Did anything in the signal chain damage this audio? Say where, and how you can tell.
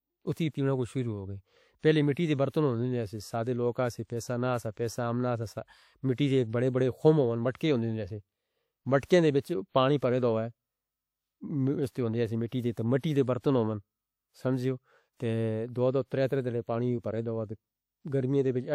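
Yes. Pre-echo appears at 0.33, 2.49, 7.56, 9.05 and 12.99 s. Each time a short hiss of 36 to 55 ms runs just ahead of a sharp speech onset, and the onset itself lands softened and smeared. That points to the codec stage. A transform coder spreads quantisation noise across a whole block, so noise sized for the loud attack leaks into the quiet stretch before it within the same block.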